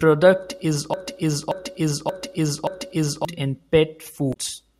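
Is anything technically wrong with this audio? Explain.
Yes. From 0.94 s to 3.25 s the speech falls into a broken-record loop: a fragment of about 578 ms plays four times back to back with no change between passes. The likely cause is a stall in the player, encoder or stream, which keeps resending the last fragment it holds instead of moving on. The speech that should have filled those seconds is lost.

At 4.30 s to 4.37 s there is damaged data in the compressed stream. For about 70 ms the decoder meets frames it cannot read correctly, loses sync and hunts for the next valid frame header. The result is a brief chirp, squawk, click or short hole that does not belong to the speech.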